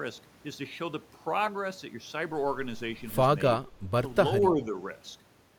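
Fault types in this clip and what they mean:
Speech suppressed in double talk, 3.58 to 3.66 s and 4.51 to 4.74 s: the speech briefly dips, by about 10 dB and then a milder 5 dB or so, likely because an echo canceller could not separate the near talker from the loudspeaker echo of overlapping far-end talk and turned the near talker down.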